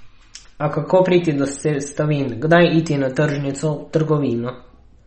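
From start to finish the speech sounds watery and swirly, with nothing above about 8.4 kHz and plainly audible metallic chirps on s sounds. That is likely MP3 compression starved of bits, fitting a rate near 32 kbps, cutting the treble and switching weak frequency lines on and off.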